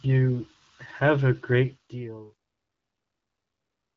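Speech whose fade-out turns gritty at 1.6 s and is at its worst from 2.26 s to the end. This is truncation distortion on a fade: the fade stage, apparently keeping about 10 bits with no dither, reduces the quiet tail to coarse square steps.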